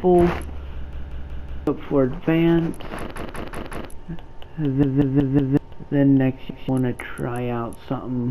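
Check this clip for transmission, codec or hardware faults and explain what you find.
Repeated buffer at 0.93 to 1.67 s, 3.16 to 3.90 s, 4.83 to 5.57 s and 6.50 to 6.69 s: new audio arrived late, so a 186 ms block, which fits an 8192-sample buffer, replays with hard joins. The first three stutter through four extra plays and lose about 0.7 s each. The last has one extra play and loses about 0.2 s.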